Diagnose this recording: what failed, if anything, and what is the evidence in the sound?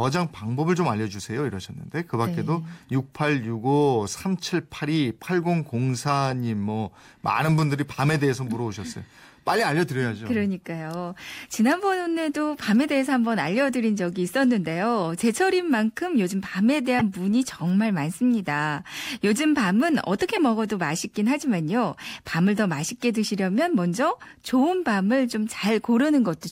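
Codec stage: corrupt frame decoded at 16.99–17.01 s and 20.36–20.40 s. Damaged frames misplace energy across frequencies, showing as brief spectrogram smears peaking near -10 and -15 dBFS.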